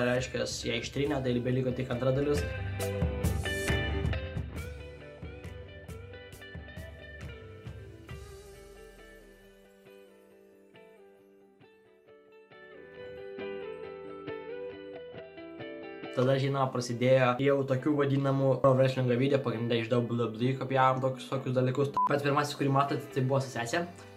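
Gain is being changed in unsmoothed 2 dB jumps, so each jump clicks, causing zipper noise. From 3.95 to 4.91 s the level drops roughly 15 dB at around seven steps a second, ticking audibly; from 12.51 to 13.05 s it climbs back faster, zipping.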